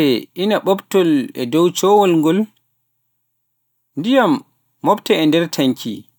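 No technical fault can be heard anywhere in the recording, with the signal level, timing and continuity holding steady from its opening to its close.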